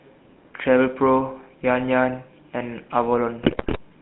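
A speech clip that has clearly been through the GSM full-rate codec the whole way, with the line band sitting at about 150 Hz to 3.4 kHz and that gravelly, buzzy roughness from the pulse-driven vocal tract model, which fits the old 13 kbit/s coder. Then from 3.42 to 3.78 s you get GSM bit errors: corrupted filter, pitch and gain values reach the decoder, so the sound squawks, pops and gargles for a run of frames, the kind of damage a weak radio link throws up.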